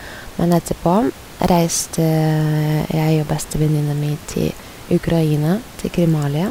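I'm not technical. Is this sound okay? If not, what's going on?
Yes, nothing stood out on listening to this speech recording.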